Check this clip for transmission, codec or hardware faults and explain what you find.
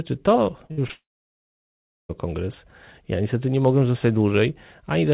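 Yes, there are several packet-loss faults early in this speech clip, on a narrowband call path whose band ends at 4 kHz, consistent with G.711 mu-law.

At 0.66 to 0.72 s and 0.87 to 0.91 s, short concealed packet loss: about 40 ms and 20 ms went missing and were patched by extending the preceding sound, heard as a brief smear.

At 0.72 to 0.79 s, a burst of packet loss: about 60 ms were lost in a row, and the receiver held and faded the last sound, leaving a short buzz or hiss before the audio resumes.

From 0.91 to 2.11 s, a gap likely caused by a long network dropout: about 1.18 s never arrived, producing a short fading continuation and then roughly 1.07 s of silence before the sound returns further on.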